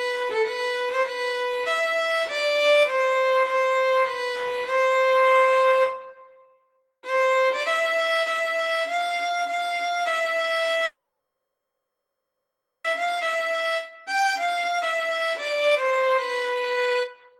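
A call audio freeze runs from 10.85 to 12.86 s: the sound stalls into a fading buzz-like continuation, with about 220 ms of near-silence, and then resumes exactly where it stopped. The likely cause is delayed packets draining the jitter buffer. On a spectrogram this shows as smeared, fading horizontal bands followed by a blank strip. From 12.99 s to the end comes a jitter buffer speed-up. To cut the added delay, the receiver drops pitch-period-sized slices, so the audio plays at about 127% speed with unchanged pitch, cutting roughly a second. A waveform shows the events packed closer together, while spectrogram harmonics stay at the same frequencies.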